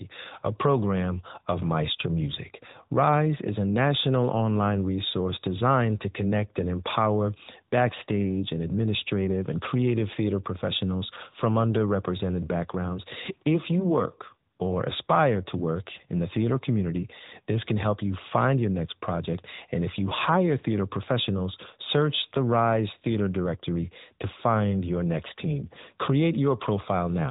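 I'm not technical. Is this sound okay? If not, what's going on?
No, not quite. The whole clip has gone through the AMR narrowband mobile codec, the squeeze old mobile networks use. Everything above about 3.8 kHz is gone, so the speech sounds muffled and phone-like, with a clearly buzzy, synthetic edge throughout.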